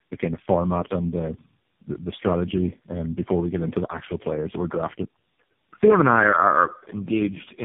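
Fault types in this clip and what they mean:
Tandem speech coding: the speech went through three low-rate speech codecs in a row, each re-coding the last one's damage, so it sounds rough, muffled and warbly, with nothing above 3.6 kHz.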